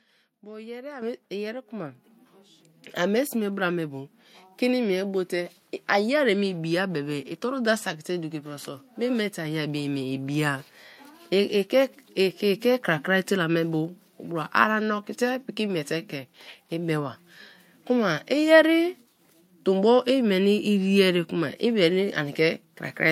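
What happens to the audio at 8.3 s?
Nothing goes wrong at 8.3 s: the speech carries on intact through that moment, with no dropout, click or distortion.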